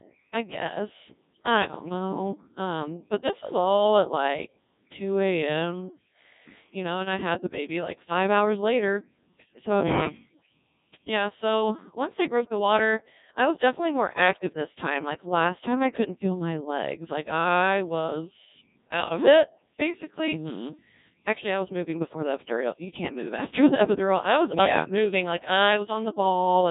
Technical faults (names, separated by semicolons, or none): Codec 2 vocoder